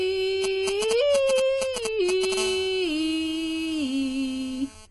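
Across the whole music clip the top end stops dead at 11.5 kHz, and the remaining spectrum sounds dull and smeared, with a fizzy, warbling texture on sustained tones. That points to AAC compression, likely AAC-LC at a low rate of around 32 kbps. At that rate the encoder cannot afford all 1,024 frequency lines per frame, so it drops the upper band and coarsely quantises what is left, and the damage is plainly audible.

From 0.44 to 2.34 s there are GSM signalling bursts: a galloping dit-dit-dit of short buzzes at 217 Hz, roughly as loud as the music itself. A nearby 2G handset is exchanging brief control transmissions with the network, and the audio circuitry is rectifying those radio pulses into the signal path. Because the phone transmits only in short groups at this stage, the interference arrives as clustered bursts rather than a continuous tone.

At 2.37 s the pattern gives way to continuous GSM phone buzz, which runs until 4.86 s. 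It is a hard, raspy 217 Hz buzz rich in harmonics, about 16 dB below the music, and it has no relation to the programme material. Once a call is established, the handset transmits in time slots 217 times a second without interruption, so the rectified envelope becomes a steady buzz instead of intermittent ticks.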